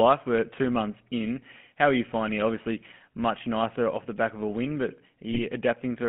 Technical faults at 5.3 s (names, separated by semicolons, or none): GSM full-rate codec; GSM bit errors